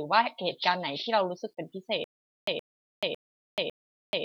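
Stutter with silent gaps from 2.04 s to the end: a 120 ms burst repeats every 552 ms with 433 ms of digital silence between, likely a stalled stream replaying its last fragment.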